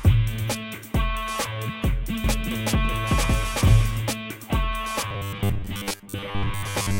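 From 2.24 to 4.00 s a second, equally loud copy of the sound trails the original by roughly 400 ms, dry and full-band, cutting in and out abruptly. This is a doubled audio track, likely from the audio being captured twice along paths of different delay.

From 5.08 s to the end, the sound turns into a rigid, metallic buzz at 100 Hz that only loosely tracks the original. This is robotic sound from repeated short buffers: the buzz rate fits a 10 ms buffer being replayed, with most of the real audio skipped in favour of repeats.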